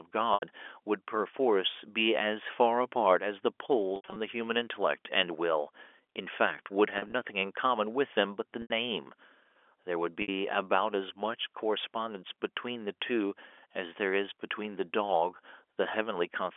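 Brief held, buzzy smears interrupt the speech five times: at 0.34 s (80 ms), 3.96 to 4.16 s (140 ms lost across 200 ms, longest run 80 ms), 6.98 to 7.14 s (80 ms across 160 ms), 8.62 s (80 ms) and 10.22 s (60 ms). This is packet loss with pitch repetition: the receiver fills each gap by repeating the last pitch period and fading it, with gaps that fit 20 ms packets. The G.711 telephone band of 300 to 3400 Hz carries the speech throughout.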